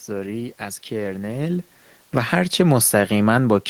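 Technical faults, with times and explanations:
1.49 s to the end, automatic gain falling: the gain control judged the input too loud or its background noise too strong and pulled its gain down gradually, so the speech steadily sinks, and the room noise sinks with it because both pass through the same reduced gain.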